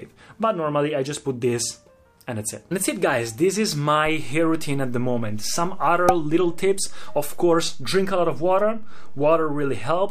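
A DC step occurs at 4.06 s. The waveform's zero line suddenly shifts to a fixed offset of about -25 dBFS and holds at that level through the end of the clip. The abrupt jump in the baseline is heard as a single low thump or click at 4.06 s. Because the offset is steady rather than changing, nothing more is heard from it afterwards, but the shifted baseline reduces the remaining headroom on one side of the waveform.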